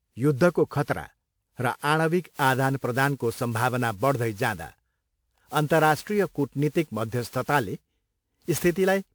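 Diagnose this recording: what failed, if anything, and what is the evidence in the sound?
Codec stage: the speech sounds swirly, smeared and hollow throughout, with blurred consonant attacks, though energy extends to 20.1 kHz. This likely comes from generation loss, around seven re-encodes with something like WMA 1 near 128 kbit/s, each pass adding fresh quantisation noise. A spectrogram would show a raised noise floor.

Converter stage: from 2.22 s, right after "युद्धको खतरा र", to the end, sample clock jitter of around 10 microseconds adds a hiss that rises with loud, bright syllables to about 20 dB below the signal. It vanishes in pauses. A spectrogram would show broadband noise tracking the speech energy.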